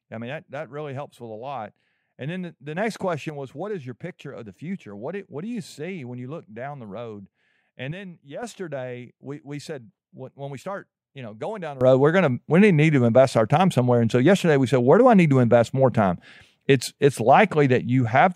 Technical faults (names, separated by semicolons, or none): sudden gain jump